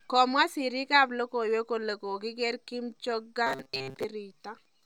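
From 3.47 to 4.05 s the speech collapses into robotic sound from repeated short buffers. It has a rigid, metallic buzz at 134 Hz. New audio likely arrived too seldom, so a short slice of about 7.5 ms kept repeating. Most of the real audio was skipped.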